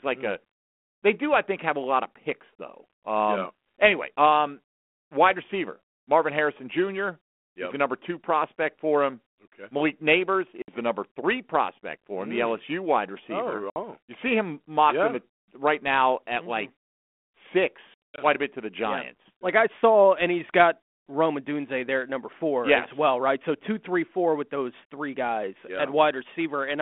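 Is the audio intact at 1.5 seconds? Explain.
Yes, the audio is intact at 1.5 seconds: the speech there comes through the 32 kbit/s G.726 ADPCM telephone path, limited to roughly 200 Hz to 3.4 kHz, with no fault at that moment.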